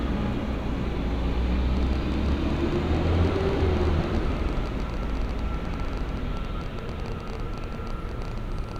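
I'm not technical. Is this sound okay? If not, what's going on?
No. From about 1.77 s until nearly the end at 8.77 s, there is an uneven ticking or popping over the sound, roughly 15 clicks a second and around a hundred in all. This train of clicks is likely interference from nearby equipment or a faulty connection or power supply.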